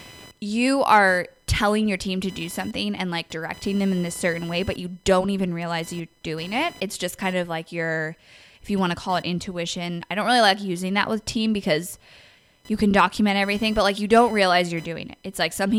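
Computer load swings disturb the shared audio ground throughout, producing computer activity noise: a faint buzzing chirp pulsing around 1 kHz, about 30 dB below the speech.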